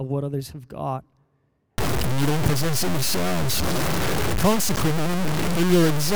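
From 1.78 s to the end, the speech turns harsh and grainy, with quiet stretches sputtering or dropping out. This is likely low bit depth without dither, roughly 3-bit truncation. The error is about as loud as the speech, a staircase waveform with broadband hash tracking each syllable.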